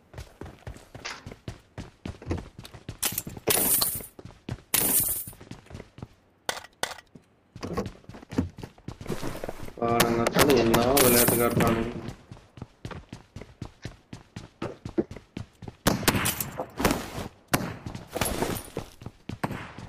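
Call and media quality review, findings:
Integer overflow: violent cracks at 3.50–3.82, 4.74–4.99, 10.00–11.68, 15.87–16.09, 16.85–16.91 and 17.54 s. A fixed-point gain stage driven about 2–5 dB over full scale wraps peaks to the opposite sign. On the waveform, peaks flip full-range. On the spectrogram, broadband vertical streaks appear.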